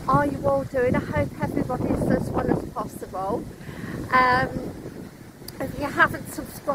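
From 4.13 s to the end, an adaptive stream at a lower bitrate: quality drops abruptly without a gap and codec artefacts rise, consistent with roughly 64 falling to 24 kbit/s Opus.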